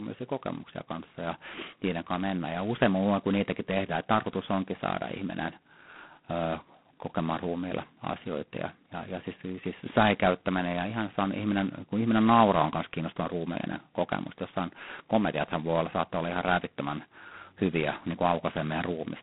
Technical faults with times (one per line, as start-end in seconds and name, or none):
0.00-19.23 G.726 ADPCM